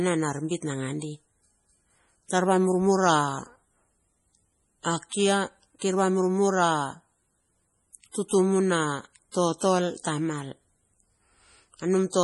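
Watery, swirling speech with metallic chirps on the s sounds and smeared consonant attacks runs from start to finish, and nothing is heard above 11.4 kHz. The damage is heavy and points to likely MP3 compression at a very low bitrate, near 32 kbps, where the encoder cuts the treble and lets weak frequency lines flicker between frames.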